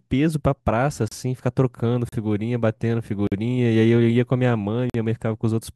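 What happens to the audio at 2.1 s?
At that point a block of samples was zeroed instead of carrying audio, leaving a block of digital silence from 2.09 to 2.12 s, a gap of about 34 ms. The speech drops straight to digital silence and comes straight back with no fade on either side. At this length the result is heard as a short hole in the speech.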